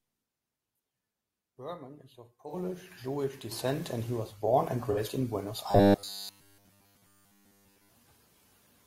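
At 2.48 to 2.54 s, just after "is of", and again at 4.92 to 4.98 s, after "he was born and", AAC frame loss with concealment occurs: a gap of about 43 ms, fitting a single lost frame, is filled from the preceding spectrum, leaving a brief smeared, noisy patch in the speech.

From 5.71 to 7.90 s the likely cause is robotic sound from repeated short buffers. Audio arrived too seldom, so a 10 ms slice was looped while most of the real signal was skipped, imposing a rigid 100 Hz metallic buzz that still loosely tracks the speech.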